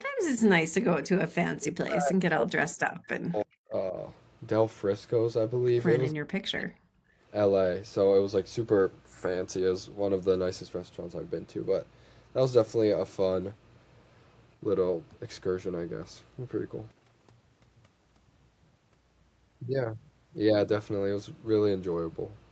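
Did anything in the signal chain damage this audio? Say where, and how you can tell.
Yes. In the call processing stage, the echo canceller gated the background at 0.06–0.19 s (about 33 dB down) and 7.09–7.22 s (about 19 dB). Only room sound ducks, not speech.

Speech dips at 1.41–3.73 s (roughly 40 dB deep), 3.91–3.95 s, 6.12–6.22 s and 6.39–6.81 s, likely speech suppressed in double talk. Unlike gating, the voice itself sinks.

A very faint echo leak at 3.39–3.44 s repeats the voice 320 ms late, likely from an uncancelled loudspeaker. This is a delayed copy, not a level dip.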